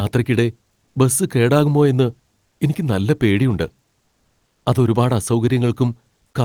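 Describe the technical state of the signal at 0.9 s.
Comfort noise in place of the background runs from 0.85 to 0.95 s, about 100 ms. The real background, about 52 dB below the loudest sound, gives way to steady, featureless hiss, shifted by about 2 dB. Likely cause: discontinuous transmission, with the receiver synthesizing fill noise.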